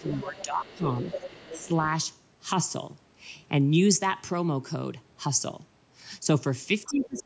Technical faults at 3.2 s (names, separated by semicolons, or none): none